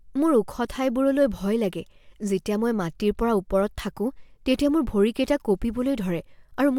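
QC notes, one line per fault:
No fault was found in this speech clip.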